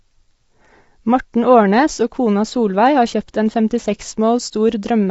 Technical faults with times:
0.00-5.10 low-delay AAC compression

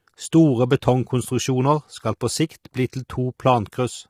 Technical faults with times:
0.00-4.10 low-delay AAC compression

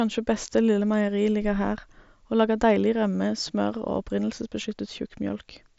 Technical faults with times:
none

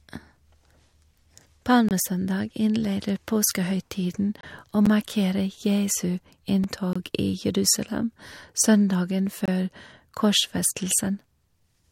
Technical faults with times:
1.89-1.91 gap between chunks
4.41-4.43 gap between chunks
4.86 block of digital silence
6.64 block of digital silence
6.93-6.96 gap between chunks
9.46-9.48 gap between chunks

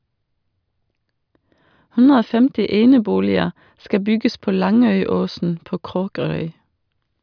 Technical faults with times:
none

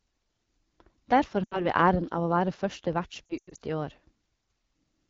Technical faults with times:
0.00-5.10 AMR wideband (HD Voice) codec
1.44-1.67 lost AMR speech frames
3.27-3.58 lost AMR speech frames

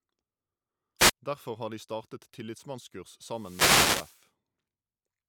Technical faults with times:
0.98-1.12 wireless microphone noise hit
3.27-4.28 wireless microphone noise hit

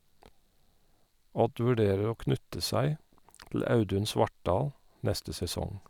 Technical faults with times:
none

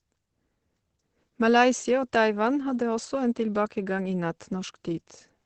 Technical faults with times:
0.00-5.45 Opus compression

